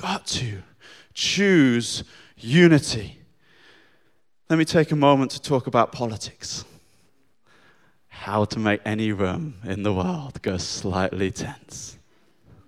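At 10.48 s there is a block of digital silence lasting 1.45 ms. The speech drops to zero and returns with no fade. The gap is too short to hear as a hole, so it comes across as a single tick. Its length fits a 64-sample buffer left unfilled.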